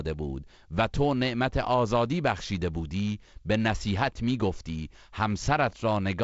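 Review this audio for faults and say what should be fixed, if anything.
No faults found; nothing needs fixing.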